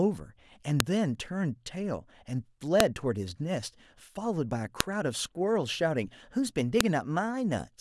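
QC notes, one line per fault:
0.80, 2.80, 4.80 and 6.81 s: file header played as audio. A sharp, loud click snaps out every 2 s, regardless of the speech underneath. Each click marks a new 2-second piece whose header bytes were left in and played as samples.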